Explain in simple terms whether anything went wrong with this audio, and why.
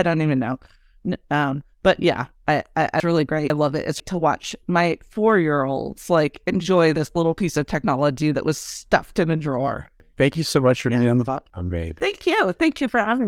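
Chunks out of order, twice. Half-second pieces of speech play late, after "yeah I I I" at 3.0 to 4.0 s, and after "stuffed in a drawer" at 10.0 to 12.0 s. The speech sounds jumbled there.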